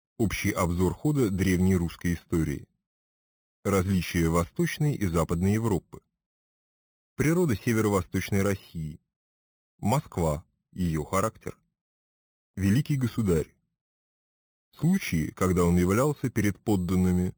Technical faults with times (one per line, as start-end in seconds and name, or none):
0.00-17.37 imaging from sample-and-hold upsampling